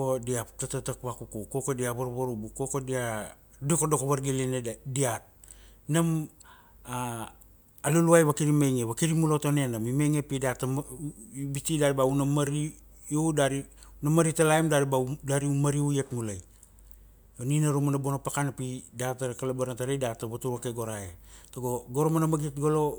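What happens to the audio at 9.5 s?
Nothing goes wrong at 9.5 s; the audio plays through that moment intact, with no dropout, glitch or other fault.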